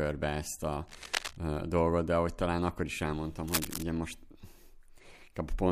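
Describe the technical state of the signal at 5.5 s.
At 5.5 s the speech signal is intact, with no audible dropout, distortion, or other fault at that moment.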